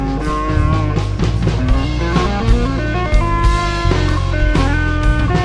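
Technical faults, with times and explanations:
Throughout, wrong sample rate: the whole clip sounds dragged and lowered, running at about 0.69 times normal speed with everything pitched down by about 6.45 semitones, so the audio feels sluggish, heavy and dark. The samples are being played back slower than they were captured, with no rate conversion, so timing and pitch shift down together by the same ratio, which fits audio recorded at 32 kHz but played at 22 kHz.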